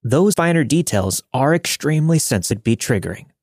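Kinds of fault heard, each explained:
Compressed frames skipped: at 0.34 s and 2.51 s the speech jumps forward because whole blocks of the encoded stream never reach the output. They were either missing or rejected by the decoder as corrupt. The gaps fit frames of 32 ms. Roughly three frames, about a tenth of a second, vanish just before "finer details are extremely". Around fifteen, about half a second, go right after "finer details are extremely".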